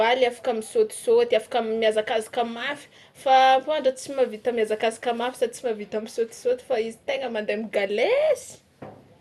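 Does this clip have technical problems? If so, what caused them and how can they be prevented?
Yes. Throughout the speech there is MP2 compression damage: nothing is present above about 12.1 kHz, and the remaining bands sound coarse, with a gurgling, granular texture and upper bands that flicker in and out. This is likely MPEG Layer II coding starved of bits, which fits a rate near 80 kbps, so the top sub-bands were dropped and the rest quantised harshly. To prevent it, encode at a higher bitrate or use a more efficient codec.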